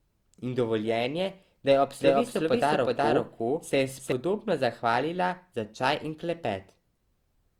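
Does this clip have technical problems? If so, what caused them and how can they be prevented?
Yes. From 2.00 s to 4.12 s the speech is heard twice, a second full-band copy trailing the first by roughly 0.4 s at about the same level, with no reverb tail or room colour, and it cuts in and out abruptly at those edges. This is a doubled audio track, likely from the same signal being captured again through a slower path or an edit leaving two copies out of alignment. Prevention: monitor for duplicate routing and check edits so only one copy of each source reaches the mix.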